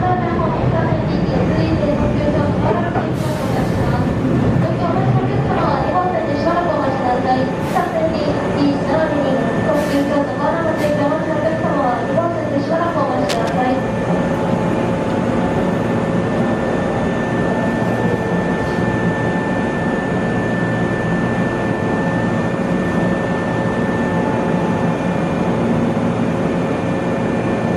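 A worn cable, connector or control likely shifted around 13.29 to 13.49 s, its contact resistance jumping rapidly. The result is cable scratch noise: a brief, dense, ragged burst of scratching and rustling laid over the sound, only somewhat quieter than the signal itself.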